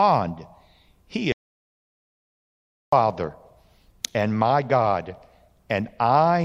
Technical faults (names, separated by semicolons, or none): audio dropout to silence